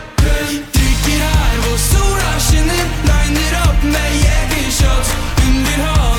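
No technical fault can be heard in the audio, with level, timing and continuity holding steady throughout.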